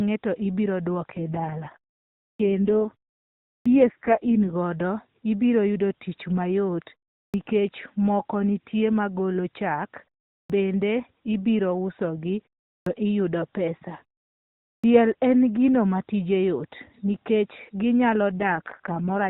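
From 1.12 s to 4.56 s an AMR rate drop takes the codec from 12.2 kbps down to 4.75 kbps, so the speech turns rough, buzzy and synthetic while the bandwidth stays unchanged. Inside that stretch come the first clipped starts after a pause, at 2.34 s and 3.60 s. The output device sleeps through each short silence and wakes late, so about 55 ms of each onset is lost and the speech begins abruptly. The same thing happens at 7.28 s, at 10.44 s just after "moko ntie magolo chak", and at 12.81 s and 14.78 s, each following a pause of 0.4 to 0.8 s and each losing roughly 55 to 59 ms. A second AMR rate drop from 12.2 to 4.75 kbps starts at 18.40 s, right after "nikech ginyalo", and the roughened, synthetic quality lasts until the clip ends.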